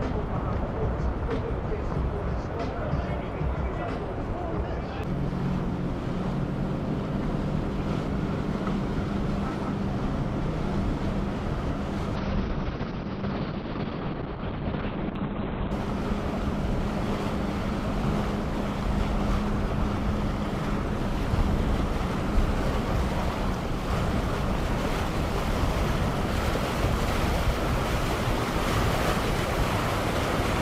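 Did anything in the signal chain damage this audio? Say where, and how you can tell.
Yes. From 12.17 s to 15.77 s there is a call bitrate drop, a network-driven fault in which the encoder was pushed from 64 kbps down to 7 kbps, staying at its lowest for about 3.5 s. The audio turns rough and muffled, and on a spectrogram everything above 4 kHz disappears behind a hard horizontal ceiling where it previously reached 20 kHz. The remaining band shows smeared, blocky texture from coarse quantisation until full bandwidth returns.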